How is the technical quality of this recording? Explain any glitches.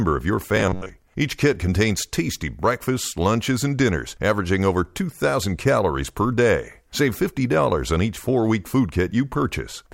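The recording has one glitch, robotic sound from repeated short buffers, from 0.56 to 0.89 s, just after "of your". The speech turns into a rigid, metallic buzz at about 94 Hz that still loosely tracks the words. The likely cause is audio arriving too late, so playback repeats a chunk of roughly 11 ms over and over, with about half the material repeated instead of heard. Unlike a dropout, nothing goes silent.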